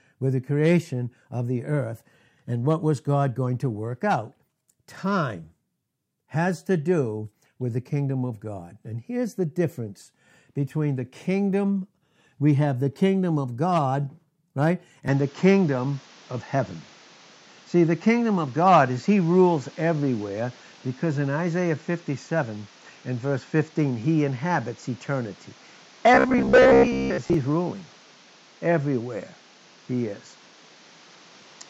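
At 15.08 s the speech turns duller and boxier, with no gap at the change, and stays that way to the end. The level shifts by around 5 dB, and new background noise sits roughly 30 dB under the voice. This is likely an input switched to a poorer device: the recording moved mid-stream to a narrower-band microphone with its own tone, gain and noise floor.

From 26.14 to 27.34 s, inside that duller stretch, the voice becomes a rigid metallic buzz near 66.7 Hz that still loosely tracks the speech. This is robotic sound from repeated short buffers, likely caused by audio arriving too seldom. The software filled each gap by replaying the last 15 ms of audio, which fits that buzz frequency. Around half of the sound there is repetition, and the real audio it replaced is lost.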